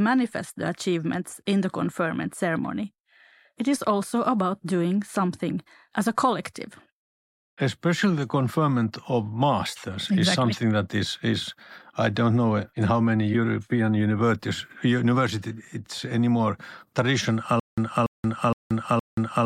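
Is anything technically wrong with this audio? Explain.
Yes. From 17.6 s to the end, the speech breaks into a stutter with silent gaps: a burst of about 286 ms plays, then 180 ms of dead digital silence, repeating every 466 ms, four times. The likely cause is a stalled player or stream replaying its last buffered fragment at each retry before running empty, so the real audio for that stretch is lost. The silent gaps set it apart from a seamless loop stutter, and the identical repeating burst distinguishes it from random dropouts.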